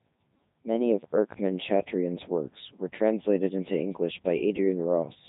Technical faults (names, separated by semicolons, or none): Codec 2 vocoder